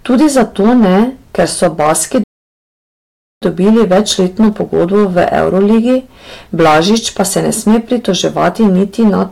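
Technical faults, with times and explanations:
Throughout, hard clipping. The speech is driven about 12 dB past what the signal path can carry. Its peaks are sliced flat, and roughly a tenth of the samples sit at the ceiling. Those squared-off tops create harmonics high above the voice. So every loud syllable carries a harsh, gritty fuzz rather than brief crackles. The overload is heavy enough that the distortion never lets up on stressed sounds.
2.23 to 3.42 s, playback stall. The speech cuts out mid-flow and the output falls silent for about 1.18 s. Sound resumes with "dobili večletno pogodbo v". The gap is a dead stop, not a fade or a dropout of a few milliseconds. This is likely a player starved of data or a blocked audio thread. The output then waits until the buffer refills.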